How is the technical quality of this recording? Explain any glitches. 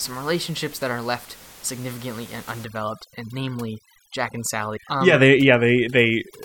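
The recording has one clear fault, and it runs from 2.64 s to the end. Room noise sits about 22 dB below the speech before that point. Just after "that are left significantly", overdone noise removal takes hold. A noise reducer set far too strong shuts off frequency bands close to its noise estimate. The background drops and breaks up into twinkling specks. Quieter parts of the speech vanish too.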